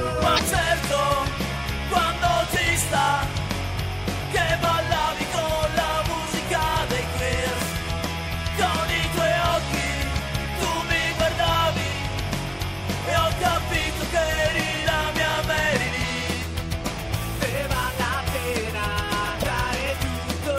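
Two short bursts of damaged data in the compressed stream break up the audio, one from 0.35 to 0.40 s and another from 19.40 to 19.44 s, each lasting about 44 ms. At both points the decoder is fed corrupted frame data, misreads or discards it and has to resynchronise on the next valid frame header. The result is a brief chirp or blip that replaces the intended sound for that fraction of a second.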